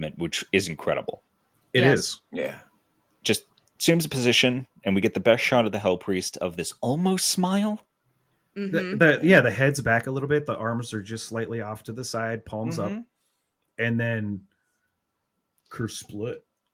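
At 5.67 s, between "get the best shot" and "of the", the microphone volume steps down by about 2 dB. Voice and background drop together in one instant step, not a gradual fade as when a speaker turns away. The likely cause is the call software trimming the input level. From 9.02 to 9.38 s, just before "the head's back a", microphone overload clips the peaks by about 2 dB. It adds a harsh crackle only on the loudest syllables, unlike steady codec roughness, and the input volume was likely set too high. At 10.05 s, between "the head's back" and "a little bit", a second step down of about 4 dB follows, likely the software reacting to that overload.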